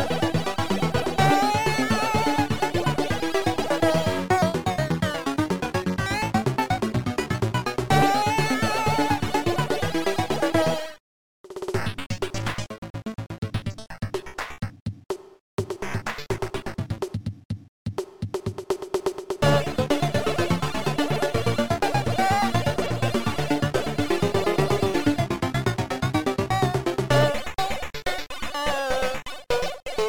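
No technical faults are audible.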